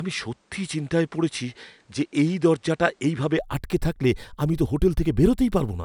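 From the start to 3.39 s, the recording was likely coming through a poorer input device, with the system switching over to a better one at that point. During this stretch nothing reaches above 10.5 kHz, so the speech sounds duller and less airy, with a faint layer of added background noise sitting well below the signal. At 3.39 s the top end opens up abruptly, with no gap at the switch and no noticeable jump in level.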